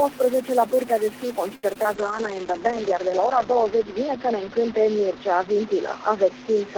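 All the way through there's a noisy, distorted grit riding on the audio, with noise filling the quiet gaps, most likely a stuck bit in the converter or data line. At 1.55 s a short stall from a late packet holds the sound for about 79 ms before carrying on, with nothing actually lost. Then come two short concealed packet losses, at 1.73 to 1.77 s and 1.83 to 1.86 s, each losing roughly 20 ms with a brief smear. From 1.96 s to the end there's a call bitrate drop from 32 to 8 kbps, with bandwidth falling from 20 kHz to 8 kHz, so the sound turns muffled and watery and bottoms out for about 1.6 s.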